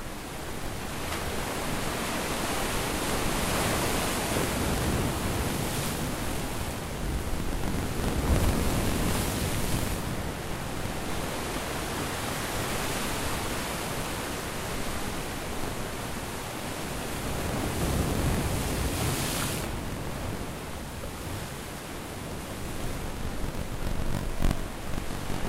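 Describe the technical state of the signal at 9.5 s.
At 9.5 s, as throughout, buffer tearing: writer and hardware read point have slipped, likely on a 1024-sample buffer, splicing roughly a tenth of each period from about 40 ms earlier, producing a 46.9 Hz rattle.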